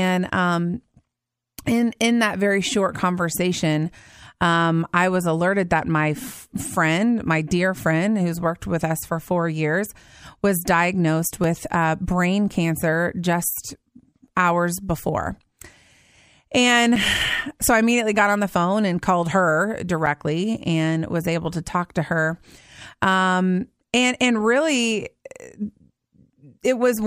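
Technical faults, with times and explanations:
11.44, 16.96 and 20.06 s, block of digital silence: the speech drops to silence for about 2 ms, then twice for 5.8 ms. That fits buffers that weren't filled in time, 256 samples in the later two, and each gap is short enough to be heard as a tick.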